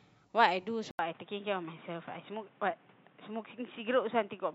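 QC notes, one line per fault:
0.91 to 4.54 s, input switched to a poorer device: after an 80 ms silence the speech turns dull and boxy, with nothing above 3.8 kHz and a new noise floor well beneath it at an unchanged level. The gap and fresh noise, which a plain filter would not add, point likely to a switch to another input device.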